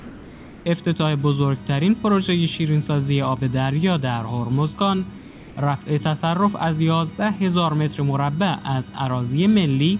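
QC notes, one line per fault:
0.00–0.66 s and 5.18–5.56 s, comfort noise in place of the background: the background turns flat and featureless, about 2–3 dB quieter; likely discontinuous transmission, with synthetic noise filling the pause.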